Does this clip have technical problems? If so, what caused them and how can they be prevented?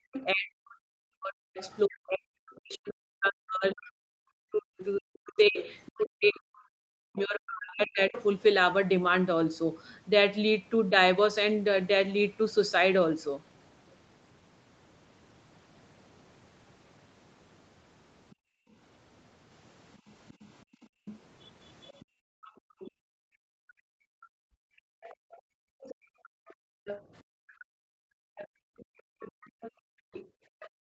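Yes. From 0.0 to 8.13 s the speech dips and breaks up, falling by roughly 40 dB at its deepest over about seven seconds. This is likely speech suppressed in double talk: the echo canceller couldn't separate the talker from the loudspeaker echo and turned both down. Better echo cancellation with proper double-talk detection, or a headset, prevents this.

A second, quieter voice runs underneath the speech from 0.13 to 1.78 s and 3.78 to 8.23 s (about 15 dB below), briefly at 18.30–18.35 s (about 35 dB below), and from 20.28 to 30.69 s (about 20 dB below). This is likely the other side's voice leaking through, as loudspeaker output the canceller didn't fully remove from the microphone. Using headphones or lowering the loudspeaker volume prevents this.

The room sound drops out from 18.35 to 18.72 s, by about 30 dB, and again from 20.64 s to the end, by up to about 40 dB. This is background gated by the echo canceller, which clamped the microphone hard while the loudspeaker played. 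Reducing echo at the source lets the canceller work gently instead of gating.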